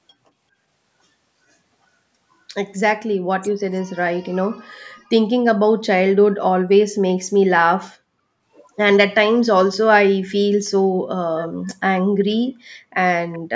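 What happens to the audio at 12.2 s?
At 12.19 to 12.25 s a brief echo leak appears. A faint, delayed copy of the speech surfaces for a fraction of a second, trailing the original by about 377 ms. It sits far below the main voice and sounds like a ghost of what was just said. The likely cause is a far end playing the call on a loudspeaker, where the echo canceller let a scrap of its microphone pickup slip back into the call.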